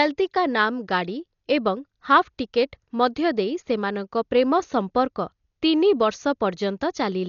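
Throughout the speech, the audio was likely squeezed through Dolby Digital compression at a very low rate, consistent with around 40 kbps, leaving many frequency lines unfilled or padded with noise. Nothing sounds above 6.9 kHz, so it is dull, with heavy rough, fluttering grit around tones.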